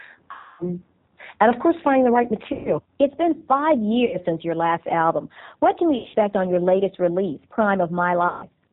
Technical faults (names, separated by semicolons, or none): G.729 codec; VoIP packet loss concealed by the speech codec